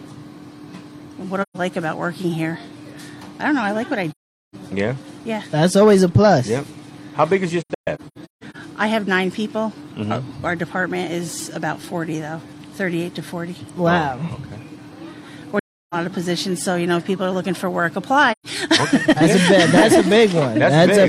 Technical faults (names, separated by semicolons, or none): AAC frame loss with muting